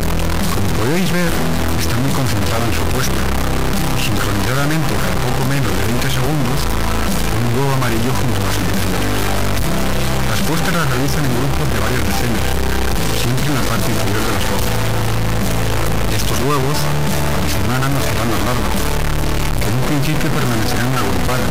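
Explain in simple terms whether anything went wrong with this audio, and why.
A stuck bit runs throughout: harsh buzzy distortion even fills the pauses, unlike clipping, which only distorts loud moments. It's likely a fairly high data bit frozen at one value.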